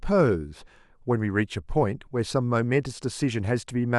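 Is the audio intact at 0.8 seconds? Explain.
Yes, the speech at 0.8 seconds plays through intact, with no dropout, click, distortion or other fault at that moment.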